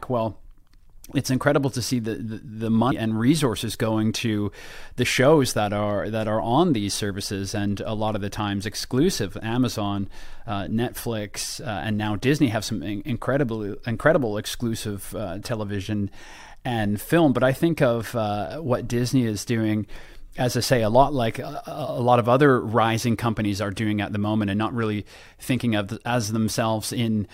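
At 2.90 s, just before "and resources going to", the speech jumps ahead by around a fifth of a second. That's compressed frames skipped: a run of coded frames never got played, either missing from the stream or thrown out by the decoder as damaged. The jump size fits about ten frames of roughly 23 ms each.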